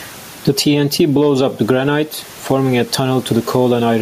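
Input gain set far too high, with a fast limiter likely clamping each loud syllable, causes gain pumping throughout the speech. Level swings by around 10 dB, with room noise, normally about 33 dB under the voice, present in the recording, squashing dynamics.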